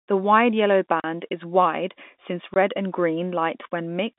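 Packets were lost in transit and the receiver played silence in their place, from 1.0 to 1.04 s and from 2.54 to 2.56 s. This packet loss filled with silence leaves 40 ms and 20 ms holes, pointing to 10 ms packets, with hard edges in the narrowband G.711 speech.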